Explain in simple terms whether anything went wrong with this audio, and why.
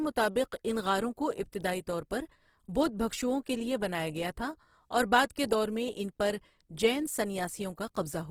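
Yes. From start to finish the speech sounds grainy and rough, with a noisy edge on it, most likely from heavy Opus compression squeezing it into too little data.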